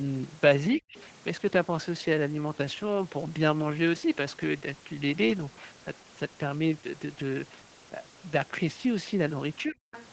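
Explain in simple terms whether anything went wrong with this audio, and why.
Speech suppressed in double talk: the speech nearly vanishes from 0.76 to 0.95 s and 9.67 to 9.85 s, likely because the echo canceller turned it down while both sides spoke.

Other side's voice leaking through: a faint second voice appears briefly at 0.96 to 1.03 s and 9.92 to 10.06 s, likely loudspeaker sound the echo canceller failed to remove.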